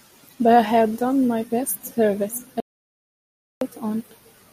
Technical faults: audio dropout to silence

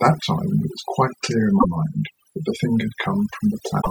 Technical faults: overdone noise removal; damaged data in a compressed stream

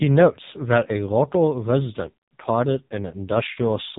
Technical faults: AMR narrowband mobile codec

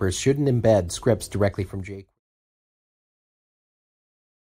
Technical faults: none

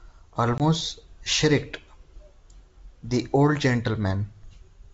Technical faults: packet loss on an ADPCM call

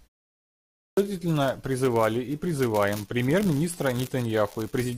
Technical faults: clipped start after a pause

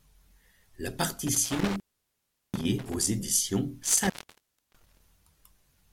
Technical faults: intermittent contact

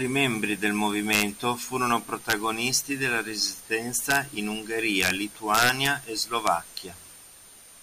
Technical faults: integer overflow

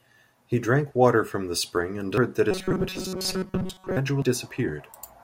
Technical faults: compressed frames skipped; robotic sound from repeated short buffers

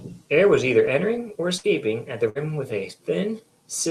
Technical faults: burst of packet loss

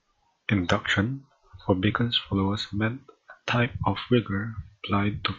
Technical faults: none

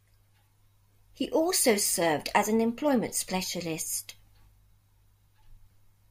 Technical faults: none

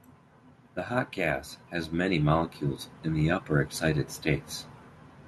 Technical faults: automatic gain rising

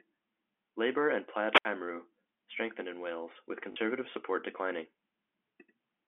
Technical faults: wireless microphone squelch dropout; packet loss with last packet repeated

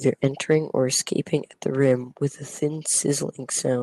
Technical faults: microphone volume stepped down

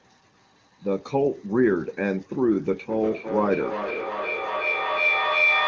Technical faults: feedback howl

